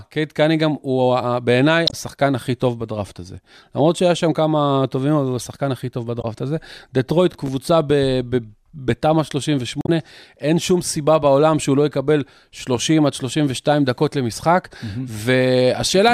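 At 1.86 to 1.94 s and again at 6.21 to 6.25 s, damaged data in the compressed stream makes the decoder misread frames and hunt for the next header. Each is heard as a short glitch in the speech. From 7.32 to 7.48 s, processor overload crackle appears as a gritty burst. Several buffers, each about 5 ms, miss their deadlines and replay stale audio, leaving a comb of sharp vertical edges in the waveform. At 9.81 to 9.89 s, another stretch of corrupted stream data produces a similar glitch.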